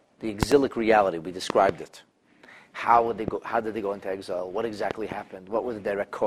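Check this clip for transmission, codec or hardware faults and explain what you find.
Four loud pop events of one kind are present. Loud pop at 0.43–0.54 s, 1.50–1.71 s, 3.28–3.30 s and 4.91–5.14 s, likely caused by a plug, switch or static discharge adding a voltage pulse to the signal. Each is a sharp thump, doubled except at 3.28 s, up to about 20 dB above the sound, which continues underneath.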